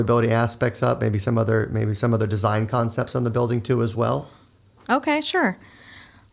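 No technical faults are audible in this speech.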